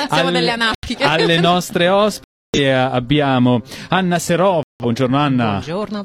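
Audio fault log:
0.75–0.88 s: corrupt frame muted. Two damaged compressed blocks were rejected by the decoder, so the player inserted silence; the gap opens abruptly and timing holds.
2.24–2.59 s: corrupt frame muted. A longer run of rejected frames, fitting about seven frame lengths, leaves a sharp-edged hole of silence while the rest stays in time.
4.63–4.85 s: corrupt frame muted. Several consecutive bad frames were refused and replaced with silence, cutting the sound off suddenly for roughly four frame lengths.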